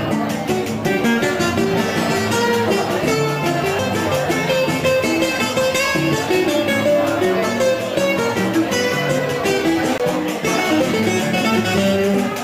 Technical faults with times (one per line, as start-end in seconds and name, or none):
3.79 CD skip
9.98 CD skip